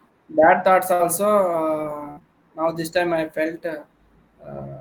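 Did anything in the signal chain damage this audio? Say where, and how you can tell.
Yes. At the network stage, bursts of packet loss hit the stream at 0.93 to 1.01 s and again at 2.11 to 2.24 s. In each, about 60 ms of audio never arrived in time. The receiver extended the last sound for about 57 ms while fading it, so the gap comes out as a decaying buzz or hiss. The sound then picks up further along, with the lost stretch gone. The second burst also adds about 13 ms of extra time.

Inside that second burst, a short concealed packet loss falls at 2.19 to 2.22 s. This is also a network fault, where roughly 20 ms failed to reach the decoder. The receiver patched about 14 ms of it by continuing the preceding sound, either as pitched extension or shaped noise, and then crossfaded back into real audio. What you hear is a brief smear or wobble layered onto the larger dropout, and a short sound there can disappear.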